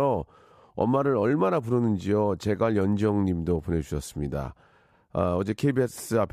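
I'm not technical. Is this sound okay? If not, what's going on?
Yes, no faults to hear.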